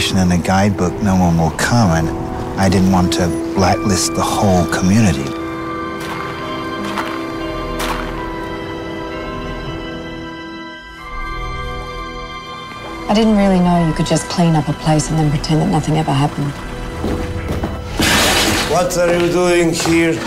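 No technical faults can be heard anywhere in the recording, with the signal holding steady and intact throughout.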